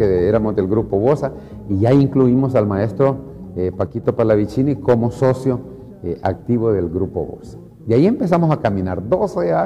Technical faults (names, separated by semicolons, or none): one channel drops out